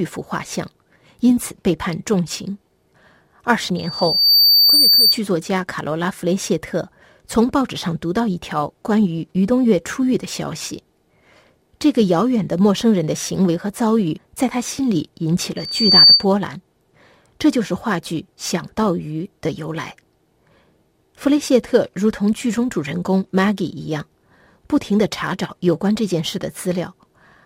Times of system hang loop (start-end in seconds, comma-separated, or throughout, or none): none